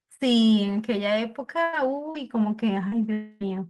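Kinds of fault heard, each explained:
Burst of packet loss: Around 1.63 to 1.76 s a run of packets went missing, about 100 ms of speech in total. The receiver stretched out the last bit of sound for roughly 93 ms, letting it fade, so you hear it hang on as a held buzz or hiss before the talker picks up again further along. Whatever was said in that stretch is simply gone.
Lost packet rebuilt from error correction: At 1.73, 2.14, 2.91 and 3.41 s a single 20 ms packet was lost, but the following packet carried a low-bitrate backup copy, so the decoder played that instead of leaving a hole. Nothing drops out at those points. Each of those brief moments just sounds a little rougher and grainier than the speech around it.
Short concealed packet loss: Around 2.11 to 2.17 s and again around 2.88 to 3.02 s, about 40 ms of audio each time didn't arrive in time. The decoder papered over the hole by continuing the last sound, about 38 ms and 30 ms of fill, then blended back in. 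It comes across as a quick smear or wobble, and in the second spot the timing stretches a touch, roughly 15 ms longer.
Long network dropout: From about 3.13 to 3.43 s, close to 280 ms of speech never made it through, most likely from a longer network dropout. The receiver filled nearly all of it, around 277 ms, by extending the last sound as a fading buzz or hiss rather than going silent. Then the speech resumes further on, with that chunk missing.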